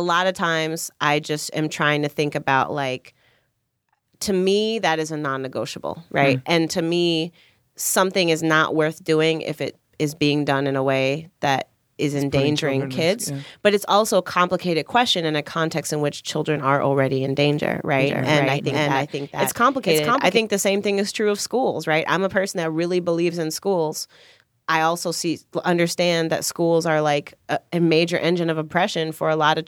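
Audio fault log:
17.99–20.37 s, doubled audio track: just after "are already in danger", a second copy of the speech runs about half a second behind the original, around 5 dB quieter, so every syllable gets a flat, clean repeat with no room tail. It cuts in and out abruptly, gone by "the same thing is". Most likely the signal was captured again through a slower path and summed back in, rather than being any kind of acoustic echo.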